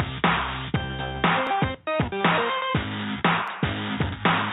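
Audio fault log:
1.47 s and 3.48 s, overlapping chunks: you get a quick click-stutter at each of these, spaced two seconds apart, because every new chunk kicks in 6.5 ms before the previous one wraps up, so that little sliver of sound plays twice right at the join.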